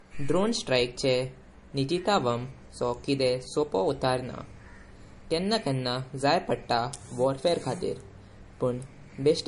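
Speech with nothing above 10.7 kHz throughout, plus smeared, swirly artefacts layered over a second, different kind of coding grain. This likely comes from transcoding between lossy codecs, which fits a low-bitrate MP3 followed by an AAC-LC encode.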